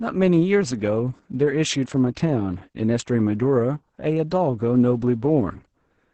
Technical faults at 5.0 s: Opus voice compression

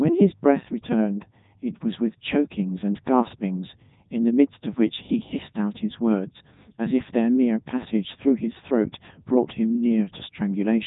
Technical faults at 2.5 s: Codec 2 vocoder

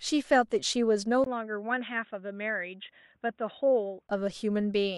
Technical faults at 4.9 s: none

